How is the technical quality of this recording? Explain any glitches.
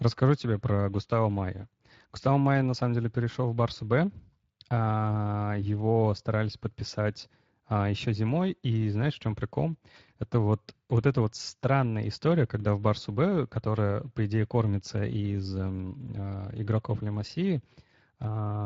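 The quality is compromised throughout by Speex codec coding. Its CELP model has too few excitation bits, consistent with roughly 20 kbps, so the speech sounds plainly hoarse and noisy.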